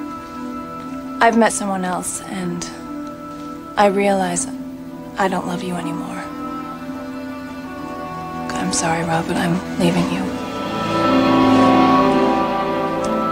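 Nothing here stands out as a technical fault, so there's nothing to flag anywhere in the audio.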